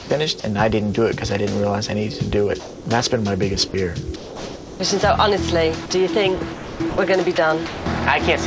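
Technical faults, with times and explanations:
0.00 to 0.44 s, sound chopped by the voice detector: about 140 ms of quiet sound gives way to flat synthetic noise, likely from switching between sending and not sending. On a spectrogram, smooth grey patches interrupt the detail.
2.60 to 2.86 s, sound dropped by the voice detector: 260 ms of steady comfort noise replaces 170 ms of real sound, likely because the detector heard it as background. The waveform shows a uniform low band.
3.68 to 4.80 s, sound chopped by the voice detector: 700 ms of the stretch flickers into comfort noise, likely from repeated detector switching. Blocks of featureless noise alternate with normal texture on a spectrogram, all cut off above 8 kHz.
5.86 to 5.90 s, sound dropped by the voice detector: a 40 ms gap filled with steady noise, likely the detector briefly missing quiet sound. It appears as a narrow flat slice in the waveform.
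6.54 to 7.86 s, sound chopped by the voice detector: 560 ms in total is swapped for synthetic noise across the stretch, likely from on-off detector decisions. The spectrogram shows intermittent smooth patches.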